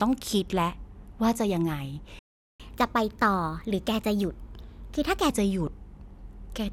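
At 2.19 s the speech just drops out for about 0.40 s, a playback stall, likely the player starving for data, before resuming at 2.60 s. From there until 5.30 s you get catch-up at higher speed: it runs 1.15 times fast, pitch lifted about two semitones.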